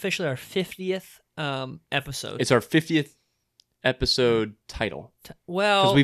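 No technical faults can be heard anywhere in the recording.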